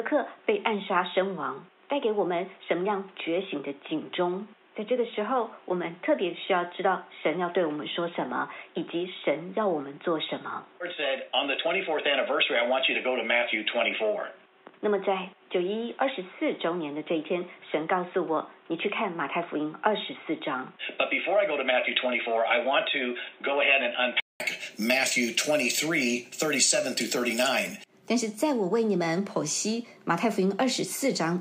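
From the start to 24.4 s the sound is dull and boxy, with nothing above 3.8 kHz and a noise floor roughly 35 dB down. At 24.4 s a 200 ms silence precedes fuller bandwidth at the same level, likely an input switched to a poorer device.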